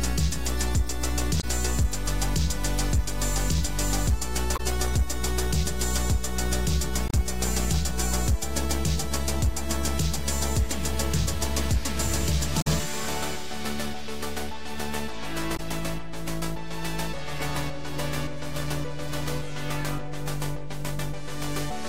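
Damaged data in the compressed stream causes brief blips at 1.37, 4.53, 7.07, 12.58 and 15.53 s, each under 0.1 s, as the decoder misreads corrupted frames and resyncs.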